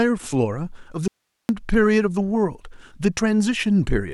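From 1.08 to 1.49 s the speech drops out abruptly for about 410 ms, leaving only faint hiss far below the signal. This is an audio dropout to a faint residue, likely a brief signal loss with the downstream path still live.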